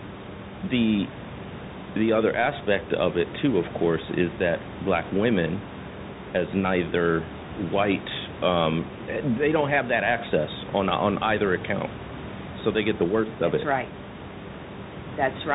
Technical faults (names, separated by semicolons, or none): Bluetooth CVSD headset codec